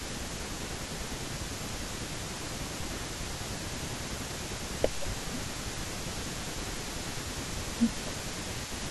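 From the start and through the whole clip, a faint delayed copy of the speech trails the direct sound by 267 ms, sitting roughly 15 dB below it. This is echo leak: the far end is likely playing the call over a loudspeaker, and its echo canceller is not fully removing what its microphone picks up, so a repeat comes back throughout.

Overlapping that, the speech repeatedly sinks in level and loses brightness, from 0.00 to 3.15 s, 3.45 to 4.31 s, 4.80 to 7.21 s and 7.41 s to the end. The deepest dips are about 15 dB in most spans and about 20 dB in the 3.45 to 4.31 s span. This pattern is speech suppressed in double talk, most likely because the canceller cannot separate the talker from the returning echo while both are active and attenuates everything, leaving the voice ducked and patchy.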